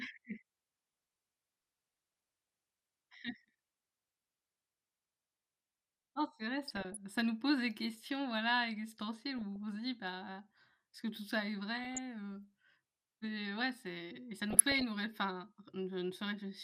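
Throughout, the speech sounds dull and plainly gurgling, with a granular roughness and upper frequencies that flicker in and out. This is likely MP2 compression at a starved bitrate, consistent with roughly 80 kbps, where upper sub-bands get switched off and the remaining bands are coarsely quantised.

Short blips of noise in single sub-bands break over the sound from 6.63 to 6.97 s, 9.38 to 9.56 s, 11.77 to 11.98 s and 14.50 to 14.84 s. This is DAB burbling: bit errors in a fraction of a percent of the data slip past error correction into the MP2 stream, corrupting samples and scale factors so that individual sub-bands jump in level for single frames.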